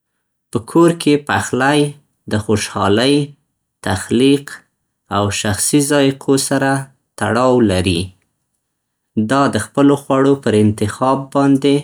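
No technical faults can be heard anywhere in the speech. There is nothing here to place on the timeline or to explain.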